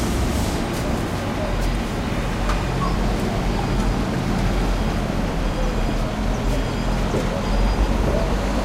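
No technical faults detected.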